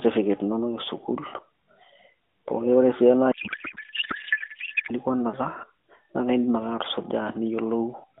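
Narrowband mobile speech, with lightly damaged AMR coding throughout, has a codec payload misread from 3.32 to 4.94 s. There the speech turns to garbled warbling noise. The pattern fits octet-aligned AMR frames being unpacked as bandwidth-efficient, which scrambles every field.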